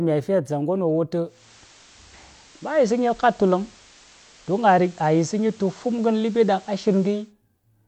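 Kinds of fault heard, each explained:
Digital radio blending to analogue: the receiver lost its digital stream and cross-faded over about 0.27 s to the FM broadcast at 1.24 s, returning at 7.33 s; meanwhile the speech shifts level by about 2 dB and carries low hiss.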